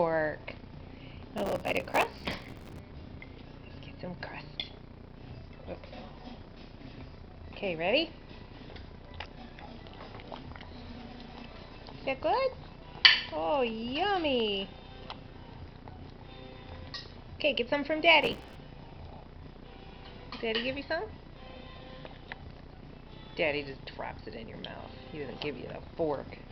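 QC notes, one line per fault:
1.38–2.79 s: processor overload crackle. For about 1.4 s the sound tears into gritty crackle as processing deadlines are missed over and over, each gap filled with a scrap of old audio joined by hard edges. The spacing fits buffers of around 5 ms. On a spectrogram this shows as dense vertical broadband streaks, and on the waveform as short repeated fragments with abrupt steps.
18.22–18.55 s: processor overload crackle. The same tearing returns for about 0.33 s, with the same stale-fragment repeats and hard joins, seen as another cluster of vertical streaks.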